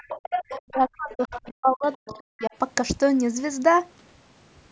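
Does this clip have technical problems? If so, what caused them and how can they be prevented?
Yes. A second, fainter voice can be heard under the speech from 0.0 to 0.77 s, then again at 1.31 to 1.51 s, 2.09 to 2.21 s and 2.39 to 2.47 s. It comes in short scraps. It starts at about 10 dB below the main speech and fades to about 25 dB below by the last scrap. This is the other side's voice leaking through, likely because the loudspeaker's output reached the microphone and the echo canceller left part of it behind. Using a headset, or lowering the loudspeaker volume and moving it away from the microphone, would prevent this.

From 0.5 to 2.52 s the speech itself keeps dipping and breaking up. It drops sharply, at worst by roughly 40 dB. Altogether about one and a half seconds are affected. This is speech suppressed in double talk. Both sides were likely talking at once, and the echo canceller could not tell its own talker from the echo, so it turned everything down. 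A headset, or an echo canceller with better double-talk handling, would prevent this.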